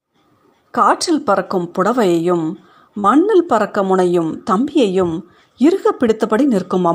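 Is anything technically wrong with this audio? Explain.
Yes. From 2.99 to 3.06 s there is short concealed packet loss. About 40 ms of the speech arrived too late for the decoder. The receiver extended the preceding sound to cover the gap, then blended back. This produces a brief smear or wobble.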